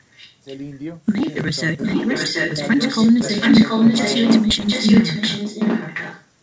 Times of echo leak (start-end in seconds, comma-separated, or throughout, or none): 0.15-0.35, 1.22-1.35, 1.80-6.25